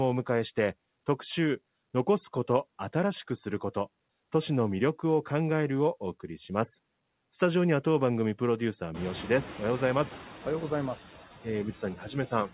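All the way through, you can hear noise suppressor artifacts. The background gets pulled down by about 19 dB, so what's left pumps between phrases.

Around 9 s the room noise jumps by roughly 24 dB, and from 8.94 to 10.11 s the noise suppressor is catching up. Its noise estimate lags, so the noise first comes through with only about 4 dB of reduction. It then sinks over those 1.17 s as the estimate adapts.

From 11.82 to 12.15 s there's speech cut by the noise suppressor. For about 150 ms in total, it mistakes parts of the speech for noise and ducks them by up to about 8 dB, so those bits sound swallowed and faint.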